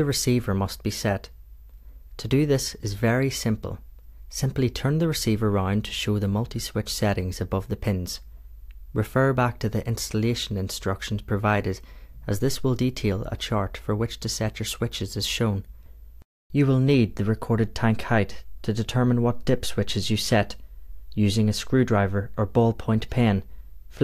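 Nothing here stands out as a technical fault; the audio runs along without any glitch or dropout that a listener would notice.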